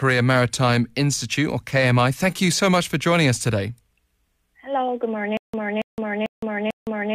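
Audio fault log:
5.37–7.15 s, stutter with silent gaps: the stream likely stalled and kept retrying, replaying its last 281 ms of speech four times with about 164 ms of digital silence after each, so the same fragment returns every 445 ms until the clip ends, and the speech that should follow is lost.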